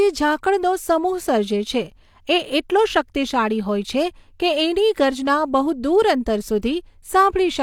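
Pre-echo at about 6.62 s: a short hiss of about 14 ms sits just ahead of a sharp onset in the speech. The codec spread quantisation noise across its whole transform block, so noise meant for the loud attack leaked into the quiet moment before it, softening and smearing the onset.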